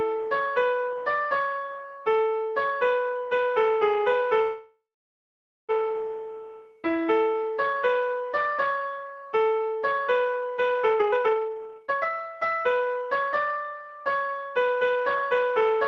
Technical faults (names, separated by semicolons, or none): call audio freeze; jitter buffer speed-up